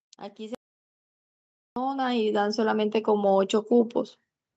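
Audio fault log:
0.36–3.99 s, automatic gain rising: speech and background noise climb together by about 17 dB over roughly 3.6 s. The automatic gain control judged the input too quiet and kept raising its gain, so the whole signal swells rather than the speech alone.
0.55–1.76 s, audio dropout to silence: the sound cuts out mid-flow and resumes 1.2 s later. The gap is silent with no room tone, likely because the input was lost while silence kept being written, so the speech in that span is gone.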